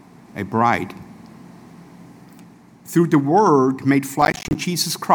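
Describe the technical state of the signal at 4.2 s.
At 4.2 s the signal is hit by processor overload crackle, running from about 4.22 to 4.55 s. The processor falls behind and misses around twenty buffer deadlines in quick succession, with buffers of roughly 10 ms each. Every missed buffer drops out to silence with abrupt edges, so the sound is repeatedly chopped into tiny hard-edged gaps. Heard together, these gaps make a gritty, tearing crackle laid over the audio for about a third of a second.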